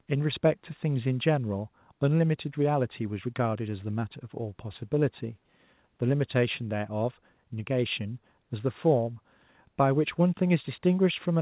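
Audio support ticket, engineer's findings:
Nothing stood out on listening, with the speech carried over a G.711 mu-law call path at 64 kbps and nothing above 4 kHz.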